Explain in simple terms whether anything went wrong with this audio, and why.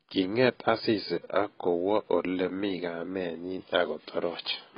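The speech was likely squeezed by AAC compression throughout, heavily damaging it and removing everything above 5 kHz, so the whole clip sounds dull and muffled.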